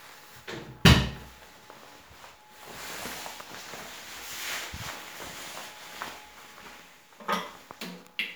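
A recording of everyday sounds, with nothing technically wrong with it.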